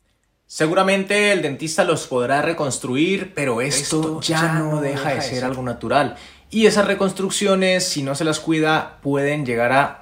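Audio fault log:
3.73 to 5.49 s, doubled audio track: a second full-band copy of the sound runs roughly 150 ms behind the original at about 5 dB lower, with no decay or room colour, and it starts and stops abruptly at those points, likely from a slower second capture path mixed back in.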